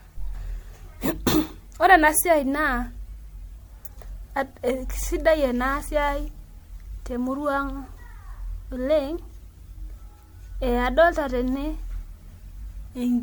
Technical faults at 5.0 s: generation loss

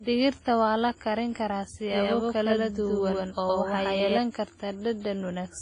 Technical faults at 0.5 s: WMA compression

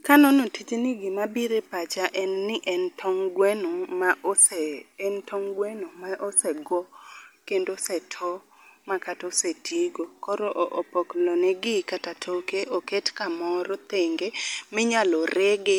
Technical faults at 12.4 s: generation loss

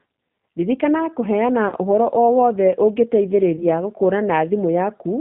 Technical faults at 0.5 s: G.729 codec

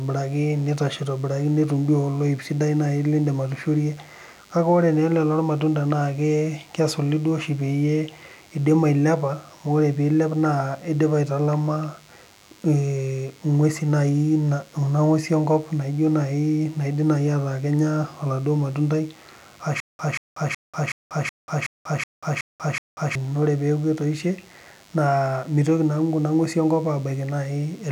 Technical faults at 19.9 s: DECT cordless phone buzz; stutter with silent gaps

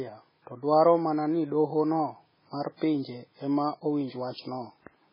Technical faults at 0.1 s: MP3 compression

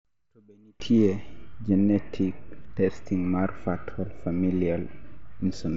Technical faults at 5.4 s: concealed Bluetooth headset packet loss

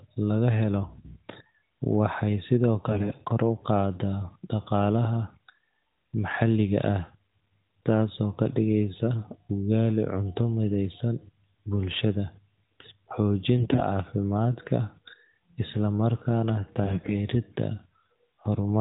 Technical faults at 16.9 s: AMR bit errors

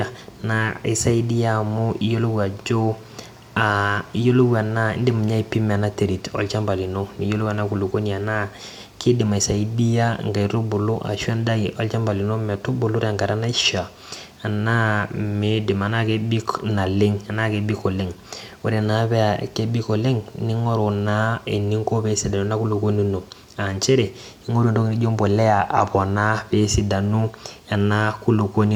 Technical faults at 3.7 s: none

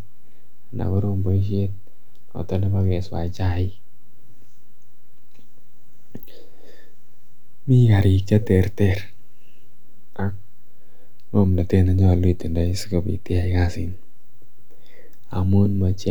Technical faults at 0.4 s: DC offset

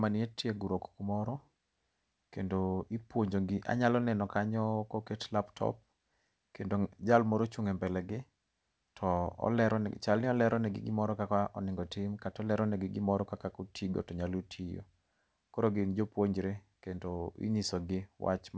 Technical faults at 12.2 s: none

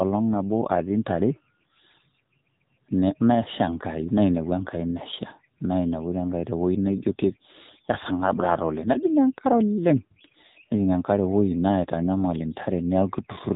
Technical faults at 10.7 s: AMR narrowband mobile codec

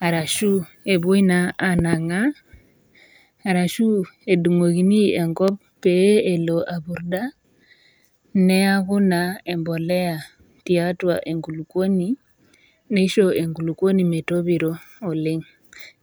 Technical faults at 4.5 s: none

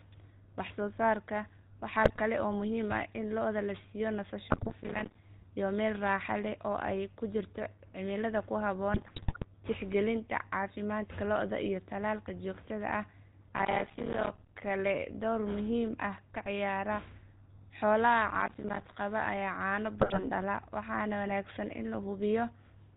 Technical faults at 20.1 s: GSM full-rate codec; GSM bit errors

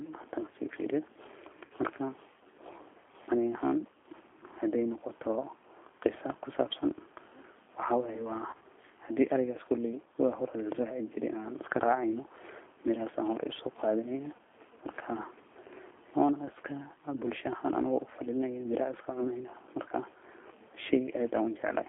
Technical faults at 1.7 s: G.729 codec; VoIP packet loss concealed by the speech codec

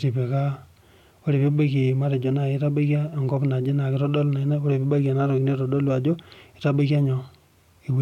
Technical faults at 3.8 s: none

